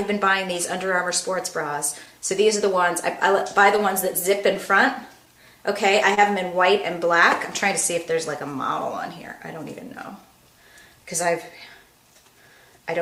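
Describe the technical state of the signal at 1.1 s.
Clock drift between sender and receiver runs through the whole clip at 1.1 s: the sender's clock is about one and a half percent slow, so the receiver's buffer keeps running short. Repeated timing corrections span 0.54 to 12.56 s, stretching playback to 99% speed and adding about a tenth of a second overall. Scattered short gaps fall between 0.56 and 2.08 s, around three tiny holes patched by extending the preceding sound, leaving brief ticks or smears.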